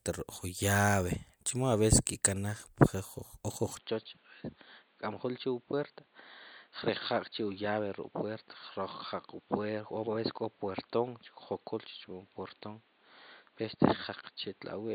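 At 3.77 s the input likely switched to a poorer device: from there the speech loses everything above 4.6 kHz, drops about 5 dB, and gains a faint new noise floor.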